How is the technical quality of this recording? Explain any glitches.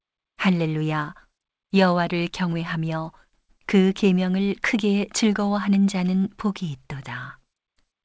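Nothing stood out on listening to this speech recording, which has the narrower sound of a G.722 call path with no content above 8 kHz, as the codec on such a call would give.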